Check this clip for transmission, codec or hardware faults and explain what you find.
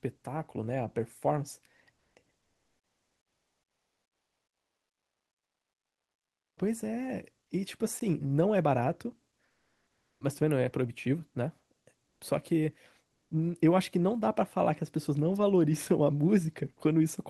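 Two kinds of fault appear: the background is repeatedly swapped for synthetic comfort noise, and there is one brief block of digital silence. The audio has passed through a call codec whose top end stops near 12 kHz, which fits Opus at around 32 kbps.

Comfort noise in place of the background occurs at 1.95–2.15 s, 2.39–6.57 s, 9.47–10.21 s, 12.09–12.21 s and 13.15–13.31 s. The longest, 2.39–6.57 s, lasts over four seconds. When the speech pauses, the real room background, sitting about 52 to 61 dB below the loudest parts, gives way to a smooth, featureless hiss. That hiss is about 2 to 3 dB louder in some gaps and about 2 dB quieter in others. This is likely discontinuous transmission in Opus, where the receiver synthesises shaped noise while the sender is idle. On a spectrogram the pauses turn uniform and grainless, losing the texture of the surrounding background.

The block of digital silence falls at 8.00 s and lasts 15 ms. 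The samples drop abruptly to silence and return with no fade. A dropout like this typically comes from an output buffer that was not filled in time. The waveform shows a flat line of silence with vertical steps at both ends, and the spectrogram shows a thin blank column bordered by broadband lines at the two edges.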